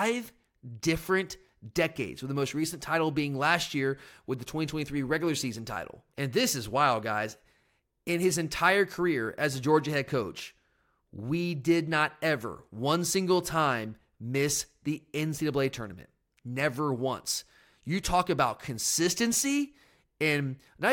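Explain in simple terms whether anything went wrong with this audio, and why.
Nothing went wrong here: the speech recording has no technical faults anywhere along its length.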